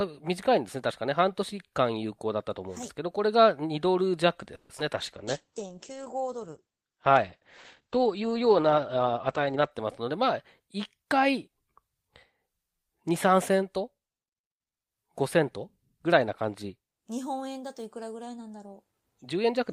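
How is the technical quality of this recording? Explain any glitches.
The recording has a cluster of network-type glitches between about 4.5 and 11.6 seconds.

From 4.55 to 4.71 s there's a call audio freeze. The last bit of sound gets stretched into a fading buzz for about 140 ms, then the audio picks up where it stopped, with nothing lost. That's likely packets getting held up long enough for the jitter buffer to run dry.

Right after, at 4.77 to 4.80 s, comes a skip ahead. Roughly 70 ms of audio is dropped and the two sides are butted together almost directly, so you hear a small jump forward, as a chunk is lost while later audio is already waiting.

From 4.94 to 9.77 s there's a call bitrate drop. The encoder falls from 40 kbps to 12 kbps, and the bandwidth shrinks from 20 kHz to 8 kHz. So for about 4.7 seconds the speech sounds muffled and a bit rough, until the bandwidth estimate recovers.

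Inside that stretch, from 5.25 to 5.73 s, there's a jitter buffer slow-down. The receiver repeats single pitch periods to rebuild its reserve, adding about 60 ms. Speech runs at about 89% speed, drawn out but at the same pitch.

From 9.55 to 11.56 s you get a jitter buffer speed-up. The buffer was holding too much, so short pitch-period slices get trimmed out, roughly 150 ms in total. Playback runs at about 107%, so it sounds slightly hurried while the pitch holds steady.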